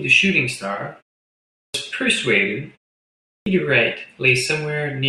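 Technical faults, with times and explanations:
1.43 s and 3.15 s, clipped start after a pause: the output device drops into a low-power state during the silent gaps of about 0.49 s and 0.46 s, then has to wake and relock before it passes sound again. Each time, roughly the first 0.31 s of the returning speech is lost, so the words burst in abruptly with their opening sounds missing.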